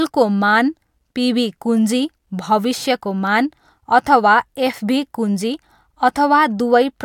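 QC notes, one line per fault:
No faults found in this speech clip.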